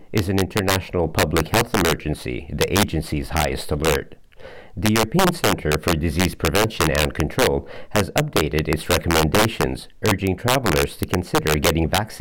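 Violent, sharp cracks burst out of the loudest moments throughout the audio, far harsher than ordinary clipping. This is integer overflow: a gain pushing peaks about 4 dB past the integer limit makes them wrap to the opposite sign instead of being held, affecting roughly one percent of samples.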